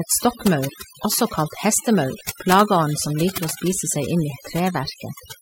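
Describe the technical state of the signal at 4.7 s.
Overdone noise removal is present at 4.7 s, as it is across the whole clip. The noise reduction is set too strong. Frequency bands near its noise estimate are pulled far down, taking quiet parts of the speech with them. The background drops and breaks up into twinkling specks.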